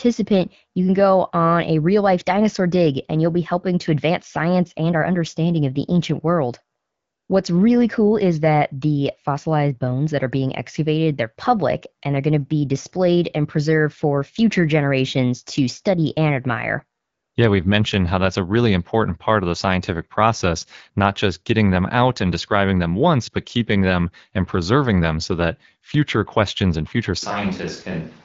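AMR comfort noise appears from 6.79 to 7.29 s, after "of the ancient world", and again from 17.01 to 17.35 s, after "to study and admire". In these 500 ms and 340 ms gaps the phone stopped sending speech frames, and the receiver generated a smooth, steady synthetic hiss in place of the real background. On a spectrogram each gap shows as a flat, featureless band with abrupt vertical edges.

From 27.23 s to the end, following "future questions and future", the sound abruptly turns roomy and hollow, with thinner bass. This is likely a switch to a distant microphone. The waveform steps down by about 5 dB, and the spectrogram shows a raised, smeared room-noise floor about 25 dB below the speech.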